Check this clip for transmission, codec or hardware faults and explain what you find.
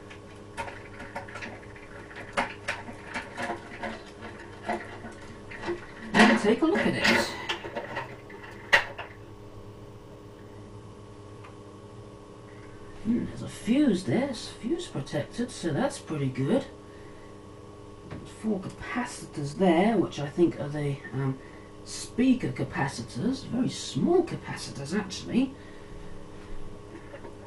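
One fault stands out: imaging from linear upsampling between 7.03 and 10.54 s. Here the audio was raised from 24 kHz to 48 kHz by joining samples with straight lines, which filters poorly. The top of the original band just below 12 kHz is softened, and a faint mirrored copy of the spectrum sits in the 12 to 24 kHz range, roughly 30 dB down. It comes across as a light metallic shimmer on bright, sibilant moments. On a spectrogram, the content below 12 kHz appears reflected upward around 12 kHz as a faint ghost; the waveform shows little change.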